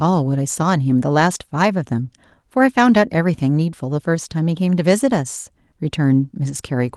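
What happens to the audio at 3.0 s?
Nothing goes wrong at 3.0 s: the speech there passes intact through the call path, carrying only the ordinary coding character of an Opus call with its top end stopping around 12 kHz.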